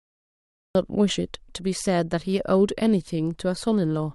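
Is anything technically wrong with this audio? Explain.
Yes, there is a cut-off start: digital silence runs to 0.75 s, then speech appears mid-sound with no attack, because capture began late. A natural pause would end with a soft onset.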